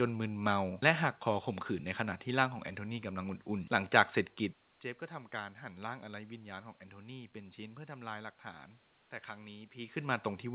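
No technical faults are present in this speech recording.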